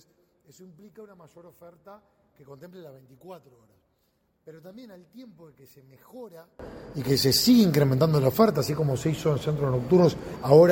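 From 0.0 to 6.59 s the sound drops by about 29 dB; the likely cause is one channel inverted, cancelling everything common to both sides. On a spectrogram the whole spectrum almost disappears, and the waveform shrinks sharply.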